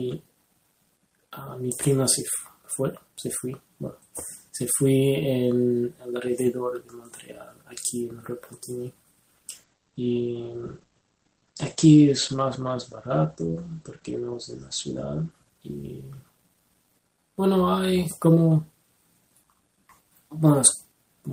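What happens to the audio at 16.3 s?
A call bitrate drop runs from 9.51 s to 17.07 s, so 16.3 s falls inside it. The call's bandwidth estimate fell and the encoder was forced onto far fewer bits. The coarser coding, consistent with a fall from about 32 kbps to 12 kbps, sounds rough and watery, and the audio band shrinks from 20 kHz to 8 kHz, dulling the top end. This reduced state holds for about 5 seconds before quality returns.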